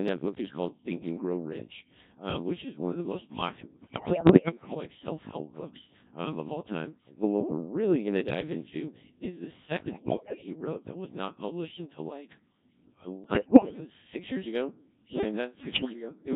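Codec 2 vocoder runs through the whole speech clip at 1.3 kbit/s, with heavy damage. At this rate the decoder receives only pitch, voicing, energy and a coarse spectral envelope for each frame, and rebuilds the voice from a bank of sine waves. The original waveform is discarded, so the voice comes out robotic and buzzy, and anything that isn't a single voice gets smeared into the same synthetic texture.

Bit errors on digital voice radio break the signal at four points. The first runs from 3.82 to 4.75 s, the heaviest of the four, with something like one bit in seven flipped. The second runs from 9.80 to 10.46 s, just after "dive into is the" and before "wrote that was not". The third runs from 13.24 to 13.80 s, ending just before "six years ago". The last and mildest runs from 15.60 to 15.93 s, right after "yeah like". At such a low bitrate, each corrupted bit rewrites the pitch, level, voicing or spectral shape of an entire frame. 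In each burst the voice lurches in pitch and loudness, changes colour abruptly, and dissolves into bleeps, warbles and robotic gibberish.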